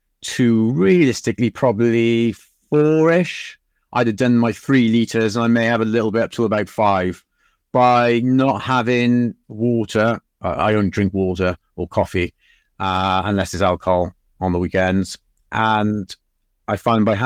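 Speech recording with no audible technical faults.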